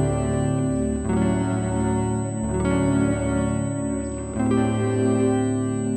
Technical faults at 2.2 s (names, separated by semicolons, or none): USB whine